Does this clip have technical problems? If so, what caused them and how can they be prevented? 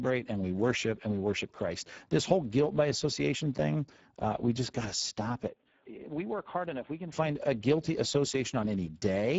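Yes. Throughout, the speech carries plainly audible Speex codec damage: a hoarse, noisy texture from too few bits for the excitation, nothing above 7.7 kHz, and a shaped noise-like fill up top, which fits a low setting around 10 kbps. Prevent it by using a higher Speex quality or a modern codec such as Opus.

From 5.48 to 7.12 s, after "just got to stop" and before "find a guilty", the sound abruptly turns dull and quieter by roughly 10 dB, with nothing above 3.8 kHz and a faint new noise floor, then clears. This is likely an input switched to a poorer device, such as a headset's call profile. Prevent it by locking the input device and disabling automatic switching.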